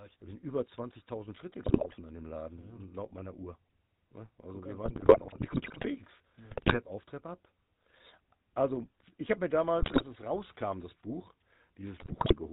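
A speech recording carrying the GSM full-rate codec from start to finish. Its plainly audible buzzy, gravelly roughness comes from a vocal-tract model excited by thinned, regularly spaced pulses, which fits a 13 kbps stream. On a spectrogram the energy stops dead at 4 kHz. GSM bit errors break the speech into squawks, pops and gargling at 1.64–1.99 s, 4.84–5.86 s, 6.50–6.79 s, 9.80–10.04 s and 11.98–12.34 s. Corrupted filter, pitch and gain values distort each affected frame. These bursts show as smeared, misshapen spectral patches and sudden amplitude spikes in the waveform.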